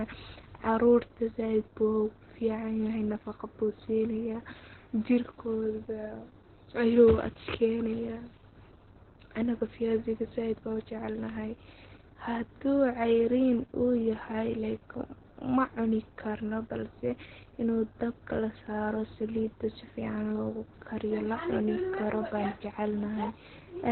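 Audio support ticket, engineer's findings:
Opus voice compression throughout: speech muffled, hoarse, slightly robotic; nothing above 4.2 kHz. Narrowband SILK mode coding the excitation coarsely, consistent with about 8 kbps.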